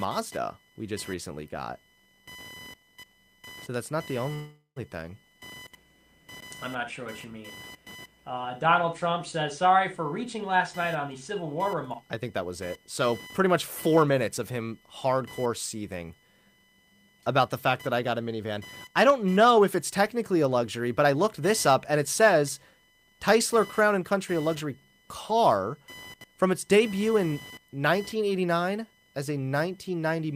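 Speech clip with a constant buzzy computer activity noise under everything, a chirpy pulsing around 1 kHz sitting roughly 25 dB below the speech that tracks the machine's load rather than the talking, which points to a shared ground picking up processor or mouse activity. At 4.33 s, right after "that's not the", there's a call audio freeze: the last sound hangs as a fading buzz for about 0.43 s, going silent for around 110 ms at the end, then the speech resumes with nothing lost, just 0.43 s later than before. The likely cause is held-up packets draining the jitter buffer. Then the jitter buffer speed-up kicks in three times, with short pitch-period chunks trimmed so the speech runs hurried at the same pitch: 10.26 to 14.14 s, between "says sorry for" and "of him hardcore", at 105% with about 0.2 s removed; 16.1 to 17.4 s, from "of him hardcore" up to "the fact", at 111% with roughly 0.15 s cut; and 21.04 to 21.41 s at 107%, dropping around 40 ms.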